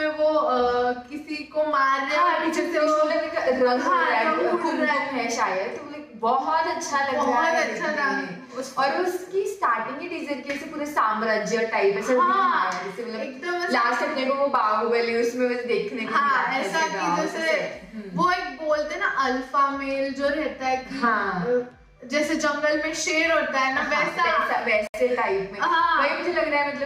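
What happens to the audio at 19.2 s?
Nothing goes wrong at 19.2 s; the audio plays through that moment intact, with no dropout, click or other fault.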